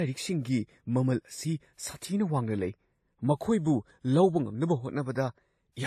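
Throughout, the speech has layered codec smear and nothing above 14 kHz, likely transcoding between lossy codecs, with a low-rate AAC-style encode and then WMA on top.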